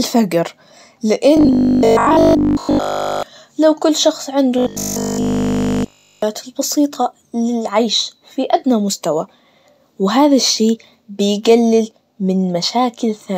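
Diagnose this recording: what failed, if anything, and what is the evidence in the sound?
Two stretches of robotic sound from repeated short buffers, likely a starved driver or playback buffer, occur at 1.37 to 3.23 s, ending just before "للو كل شخص عنده", and at 4.58 to 6.22 s, between that phrase and "البسيطة للعيش في أدنى". Essentially all of the audio in each stretch is replayed fragments. The voice becomes a rigid metallic buzz at 50 Hz, which fits a 20 ms block looped while the real audio is skipped. Unlike codec artefacts, the buzz holds a fixed pitch that doesn't track the speaker.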